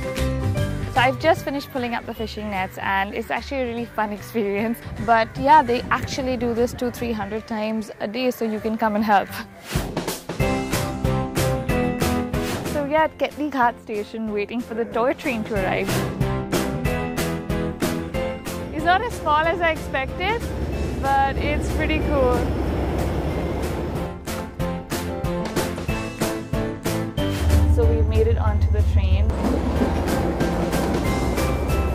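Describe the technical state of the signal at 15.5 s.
At 15.5 s the signal is intact, with no dropout, distortion, glitch or other technical fault to be heard.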